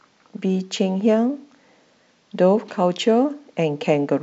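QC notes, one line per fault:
Nothing to flag on this speech clip, so there's no fault to log.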